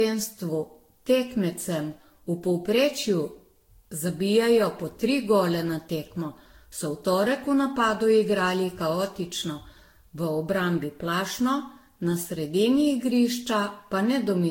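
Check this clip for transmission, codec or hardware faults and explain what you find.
There's one codec fault running through the whole speech clip. Generation loss: swirly, hollow, smeared, with blurred attacks and nothing above 16.6 kHz, likely from around ten Vorbis re-encodes near 60 kbit/s, each adding fresh quantisation noise.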